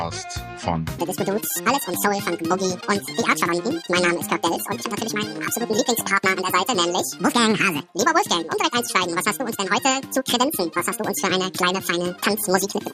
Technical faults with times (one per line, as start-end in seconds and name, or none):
0.99-12.93 audio read two samples at a time (double speed)